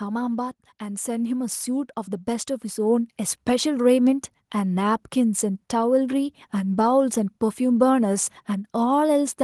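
Automatic gain rising from 0.78 to 3.54 s: the gain control, judging the input too quiet, lifts level by about 8 dB, so speech and background swell together.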